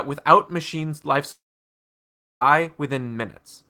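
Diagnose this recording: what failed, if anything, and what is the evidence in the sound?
The fault sits at the network stage: a long network dropout is the likely cause. Just after "without machines' life", at 1.31 s, the speech smears into a short, fading buzz, then goes to silence for about 1.03 s. At 2.43 s the speech resumes mid-stream, with about 1.1 s of material missing. The receiver stopped getting packets, briefly extended the last sound, gave up, and continued once the stream came back, without recovering the lost audio.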